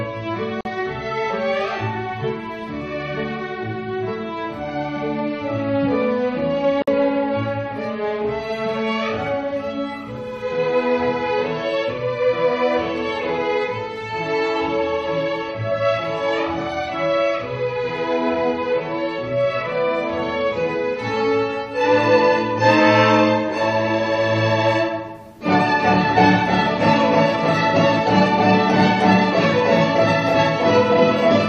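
At 0.61 s and again at 6.82 s, continuous sound breaks into silence for 44 ms and then 54 ms: a gap at a join of encoded pieces. Each piece kept its encoder's leading delay and padded final frame. Unlike a dropout, nothing is lost; the sound resumes exactly where it stopped. From 14.96 to 16.96 s a faint USB whine sits well below the sound. Bus current pulsing in 1 ms frames leaks in as a steady 1 kHz tone, loudest at its 3 kHz harmonic. Its fixed, high pitch separates it from 50 or 60 Hz mains hum.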